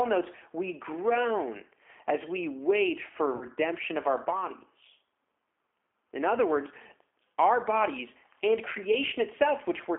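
G.729 coding runs through the whole clip. The speech is rebuilt at 8 kbit/s from a vocal tract filter, a pitch predictor and a few pulses per frame, within a 300 Hz to 3.4 kHz line band, so voices sound plainly rough and slightly synthetic.

VoIP packet loss concealed by the speech codec occurs from 3.36 to 3.50 s, between "as we wait for" and "of our". About 60 ms of audio is missing, which fits six lost 10 ms frames, scattered over 120 ms with the longest gap about 50 ms. The decoder stretches its last pitch and filter into a buzzy tone or coloured noise that fades, and the speech stays weak until the frames rebuild.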